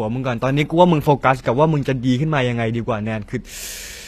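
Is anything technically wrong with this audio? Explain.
Yes. Throughout the speech, the audio has likely passed through HE-AAC compression at a low rate, consistent with about 24 kbps. Only the lower spectrum is properly coded. The treble is rebuilt by copying lower bands upward and fitting them to a rough envelope, so the upper harmonics no longer line up with those below the crossover. The damage is plainly audible: s sounds turn gritty and metallic, and nothing remains above 14.9 kHz.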